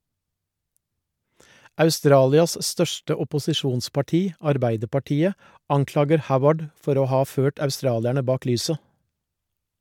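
Nothing stood out on listening to this speech recording.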